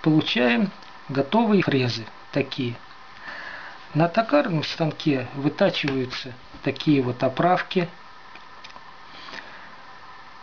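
At about 1.61 s the audio jumps forward: compressed frames were skipped, so a short stretch, roughly three frames or about 70 ms, never plays. The jump matches a frame length of 26.1 ms, which points to frames missing from the file or rejected by the decoder as damaged. What separates this from a dropout or a hard edit is the join. It is a brief smeared blip from overlapping neighbouring frames, not silence and not a sharp click.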